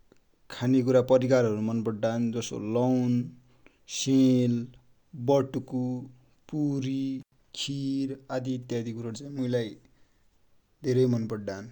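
At 7.21 s the speech cuts out abruptly. This is an intermittent contact fault. A loose cable or plug briefly lost its connection, breaking the signal path. The line stays open for about 92 ms, and the sound returns at 7.34 s. Crackle marks both edges of the gap, where the contact scrapes open and then closes again. During the dropout a faint hiss remains.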